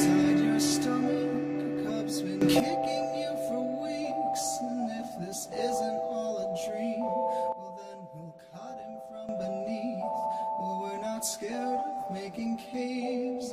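The audio has two sudden gain jumps. From 2.42 to 2.60 s the level leaps up by about 12 dB, and from 7.52 to 9.29 s it drops by about 11 dB, each change landing instantly at both edges. The background noise shifts by the same amount as the foreground, and there is no gradual ramp, which rules out a fade or compressor pumping. The likely cause is a digital gain setting applied without smoothing.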